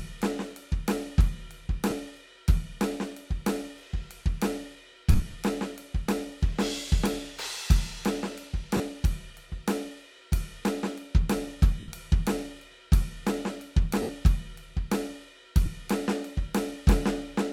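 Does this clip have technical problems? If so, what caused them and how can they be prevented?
Yes: lost LE Audio frames at 1.90–1.92, 5.12–5.34 (scattered, longest run about 50 ms), 8.77–8.80, 11.80–11.88, 14.02–14.09 and 15.66 s. Concealment repeats the last spectrum with random signs, so tones smear into noise instead of clicking or dropping to silence. Prevent it with a stronger link: shorter distance and less 2.4 GHz interference.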